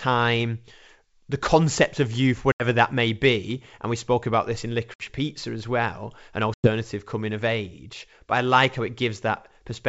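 Packet loss on an ADPCM call cuts hard-edged silent holes after "the concept of youth" at 2.52–2.63 s, after "spoke about this in" at 4.94–5.08 s, and after "as well an" at 6.54–6.68 s, before "coming of age". About 80, 60 and 100 ms of audio go missing, a few packets each time. Unlike a plain dropout, speech resumes slightly distorted and settles within tens of milliseconds as the decoder's predictor and step size catch up with the sender's.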